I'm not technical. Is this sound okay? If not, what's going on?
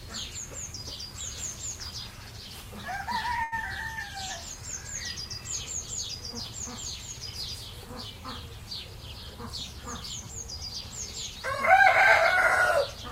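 No. At about 3.43 s there is a short stall from a late packet. A piece of the audio arrived late, so the player held the last bit of sound for about 86 ms until it came. Nothing is lost, but everything after that point plays slightly later.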